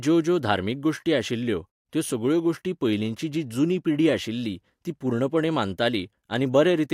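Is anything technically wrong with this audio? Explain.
No, nothing in this speech recording stood out as a technical problem on listening.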